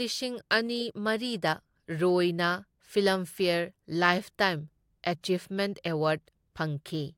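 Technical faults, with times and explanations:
No technical faults detected.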